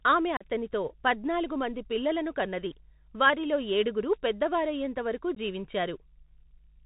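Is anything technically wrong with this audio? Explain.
Yes, three faults are audible.

Mains hum runs under the whole clip: a steady 50 Hz tone, about 30 dB below the speech. A ground loop or nearby transformer has leaked the power line into the signal. It stays a smooth, low drone with few harmonics, which separates it from a rasping buzz, and its level stays the same during pauses and speech, so it is not room rumble or handling noise.

The Bluetooth CVSD headset codec damage is plainly audible throughout. The sound fits a 64 kbit/s CVSD link, which encodes only whether each sample steps up or down, with an adapting step size. Everything above 4 kHz is cut off, s sounds turn scratchy where loud high-frequency energy outruns the step, and a granular hiss sits under the speech. That grainy hiss and hard 4 kHz ceiling set it apart from the swirly, watery artefacts of perceptual codecs.

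Unconcealed Bluetooth headset packet loss occurs twice. The first dropout, between 0.37 and 0.46 s, removes about 37.5 ms of audio, a handful of short headset packets. The second, at 5.35 to 5.37 s, removes 15 ms, a couple of packets. Nothing fills the gaps, so the speech has holes with abrupt edges and returns briefly quieter as the CVSD step size rebuilds. These isolated holes are distinct from the continuous codec grain around them.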